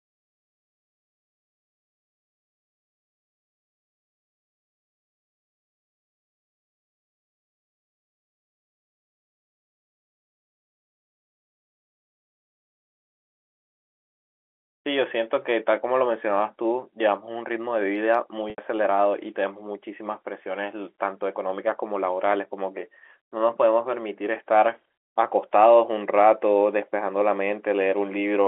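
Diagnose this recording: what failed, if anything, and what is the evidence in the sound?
A brief buzzy, held tone at 18.5 s for 80 ms: packet loss in the network, bridged by pitch repetition of the last period, which then fades.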